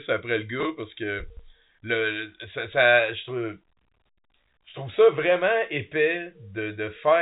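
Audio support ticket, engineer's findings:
Chunks out of order at 0.60–0.65 s and 1.30–1.39 s: brief jumbled sound at the hard joins. Likely playback buffer or jitter queue releasing a 23.22 ms block late, one chunk behind first, three behind second. G.711 band-limit audible, no codec fault.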